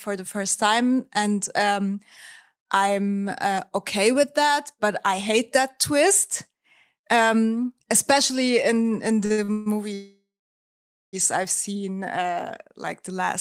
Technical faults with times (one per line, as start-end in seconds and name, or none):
9.25-9.68 repeated stalls (stutter)
9.94-11.15 call audio freeze